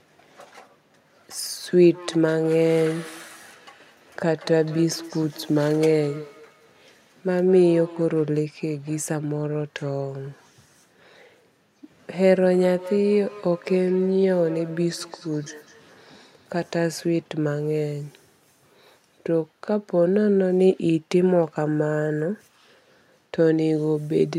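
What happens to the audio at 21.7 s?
Nothing goes wrong at 21.7 s; the speech continues intact through that moment with no audible fault.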